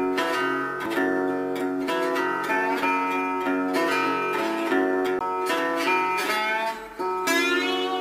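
At 0.86 s and again at 5.2 s there's a CD skip: the laser jumps tracks, giving a brief tick and mute (a few ms, then around 15 ms) before the sound resumes elsewhere.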